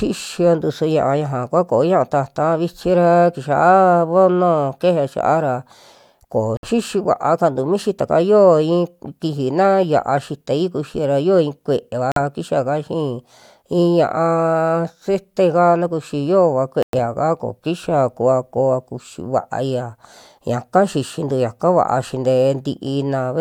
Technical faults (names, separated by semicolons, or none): Bluetooth dropout